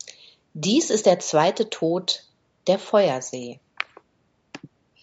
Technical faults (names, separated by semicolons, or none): none